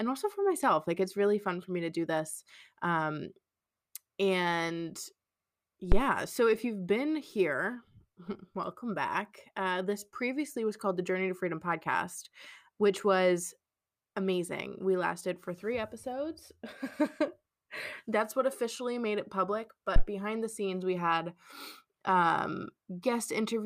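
At 5.92 to 6.03 s, just before "so if you've been", there's a phantom power thump: supply switched on or off on a live input, the step punching through the coupling caps as a deep thud peaking around −12 dBFS and dying in 26 ms. Same again at 19.96 to 20.03 s, between "officially made it public" and "behind the scenes we", decaying in 16 ms.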